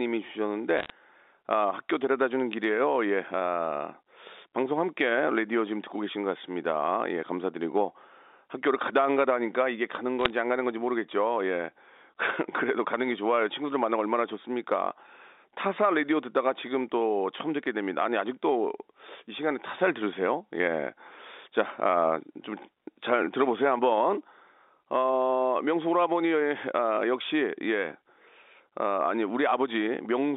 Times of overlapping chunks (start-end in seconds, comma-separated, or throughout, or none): none